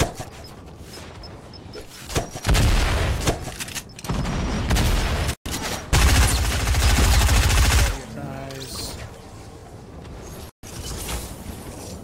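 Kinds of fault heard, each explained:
Overlapping chunks: a short stutter recurs every 2.5 s, because each chunk starts 23 ms before the previous one ends, so that sliver plays twice.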